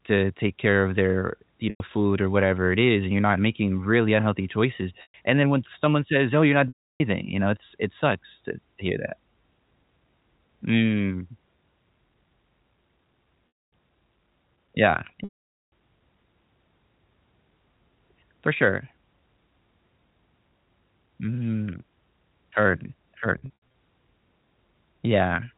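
Packet loss with pitch repetition occurs at 1.70–1.80 s, 5.02–5.14 s, 6.68–7.00 s, 13.48–13.72 s, 15.24–15.70 s and 23.38–23.74 s. In each, audio went missing and the receiver looped the last pitch period to fill the hole. That gives a brief held, buzzy tone; in the longer gaps it fades out over about 50 ms into silence before speech cross-fades back in.

The gaps are 100 ms, 120 ms, 320 ms, 240 ms and 480 ms. The 480 ms drop leaves the longest silence. The last one is different: 200 ms of losses scattered across 360 ms, the longest run 80 ms, so it sounds like several stuttering buzzes rather than one dropout. The lengths fit 20 ms packets, heard through G.711 telephone coding with nothing above 4 kHz.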